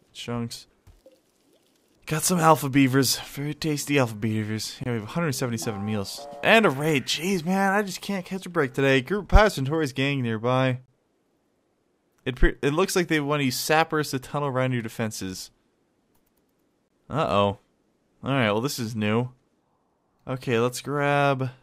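At 4.84–4.86 s, 10.86–10.88 s and 16.88–16.90 s you get a gap between chunks: a hole of about 23 ms every 6 s. The audio was delivered in 6-second pieces with silence inserted at each join. Nothing's missing, but each join reads as a brief dropout.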